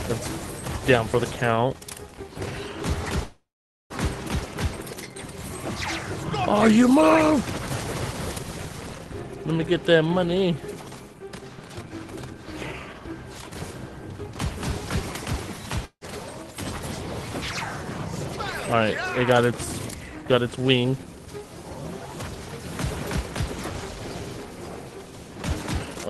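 Audio carried over a WebRTC call path, with coding noise and a high-frequency cut-off near 12 kHz that fits Opus at around 20 kbps. From 3.23 to 3.93 s there is a call audio freeze. The last sound is stretched into a fading buzz or hiss that drops to silence for 460 ms, and then playback resumes where it stopped with nothing lost, most likely because packets were held up and the jitter buffer ran empty. A long network dropout at 15.85 to 16.04 s removes about 160 ms of audio. A short fading fill gives way to about 80 ms of silence, and the audio picks up further on. Jitter buffer speed-up trims short pitch-period pieces to shed excess delay. It runs at 114% from 11.63 to 11.92 s, removing about 50 ms, at 108% from 17.98 to 21.13 s, removing roughly 300 ms, and at 140% from 25.79 to 26.04 s, removing roughly 100 ms. Each of these stretches sounds hurried at unchanged pitch.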